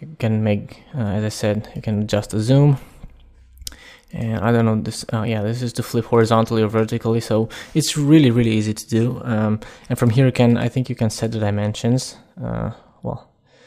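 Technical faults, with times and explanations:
No technical faults are audible at any point, and the signal stays continuous and steady throughout.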